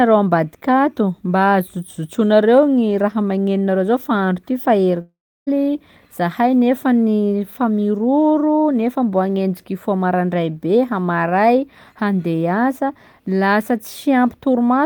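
A long network dropout runs from 5.01 to 5.49 s. The speech turns into a fading buzzy continuation of its last sound, then 0.32 s of near silence, and resumes with 0.46 s missing, likely because packets stopped arriving and the receiver padded the gap.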